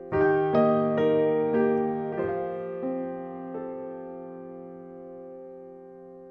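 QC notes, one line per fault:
No fault found, so there is nothing to note on any line.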